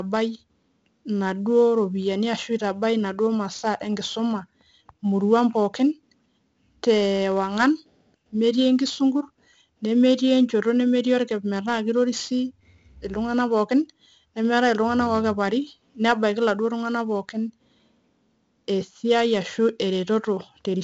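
Throughout, 4-bit ADPCM compression coats the speech in heavy, gritty hiss that rises with loudness, as each sample becomes a coarse step from a prediction; sharp onsets distort. A spectrogram shows level-tracking broadband noise and nothing above 7.8 kHz, fitting 64 kbps at 16 kHz.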